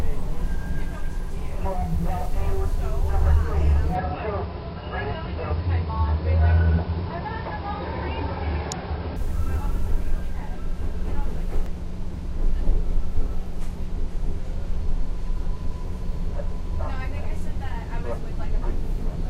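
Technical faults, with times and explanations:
3.95 to 9.16 s, input switched to a poorer device: the sound suddenly loses everything above 5.3 kHz and turns dull and boxy. It drops about 5 dB in level, and a new background noise floor appears roughly 40 dB below the signal. There is no gap at either change. The likely cause is the recording input moving to a lower-grade microphone or a headset call profile, whose narrower band, tone and noise replace the original path until it returns at 9.16 s.
8.72 and 11.66 s, damaged data in a compressed stream: each point has a very brief glitch, a few milliseconds long. Corrupted bytes in the encoded stream make the decoder misread or reject the affected frame. It then loses sync and searches for the next valid frame header, so the output there is disrupted.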